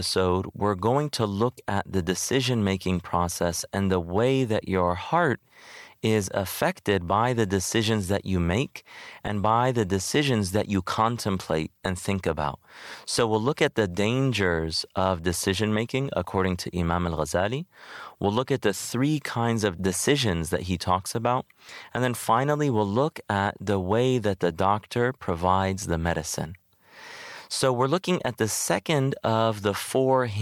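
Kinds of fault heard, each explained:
No technical fault can be heard anywhere in this speech recording.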